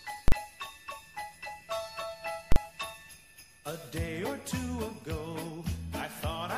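Two sharp, very loud bangs cut through the audio, the first from 0.28 to 0.32 s and the second from 2.52 to 2.56 s. Each is a 40 ms block of invalid numbers at full scale. A calculation went wrong and produced infinite or invalid values, which were forced to the extreme positive or negative limit. The output stayed pinned there for the whole block. Because the block is so short, each event lands as a single bang.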